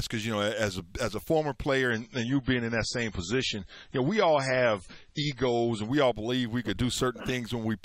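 From 1.91 s to 5.91 s the sound abruptly turns dull and swirly, with nothing above 10.5 kHz, then snaps back without any gap. This is an adaptive stream at a lower bitrate, consistent with a switch from 128 to 24 kbit/s MP3.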